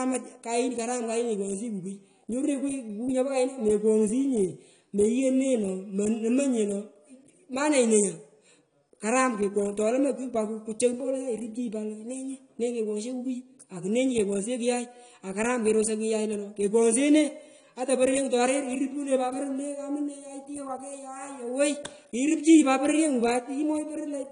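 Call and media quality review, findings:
AAC compression, throughout. Speech dull and smeared, nothing above 10 kHz, warbling on sustained sounds and fizz on sibilants. Likely AAC-LC encoder starved of bits, consistent with roughly 32 kbps: cut-off lowered, coarse per-frame quantisation leaving spectral holes.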